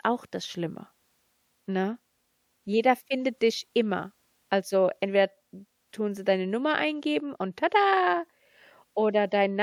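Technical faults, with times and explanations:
Nothing technical to flag here, as the recording runs without any faults worth pointing to.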